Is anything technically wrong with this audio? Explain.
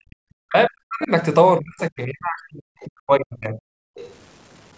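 Yes, there are a few problems. Throughout, quiet parts of the speech turn gritty with grainy distortion that tracks the voice, likely low bit depth without dither, around 8-bit truncation.

From 0 to 1.1 s, 1.59 to 2.62 s and 2.86 to 3.59 s, the talker's voice dips deeply, likely speech suppressed in double talk as the echo canceller ducks both voices at once.

At 2.8 to 2.86 s and 3.95 to 4.13 s a faint second voice slips through well below the talker, likely the other side's voice leaking through from the loudspeaker.

From 3.87 to 3.95 s the room sound briefly drops out by about 36 dB: background gated by the echo canceller clamping the mic while the loudspeaker plays. The band limit at 8 kHz is just normal call processing.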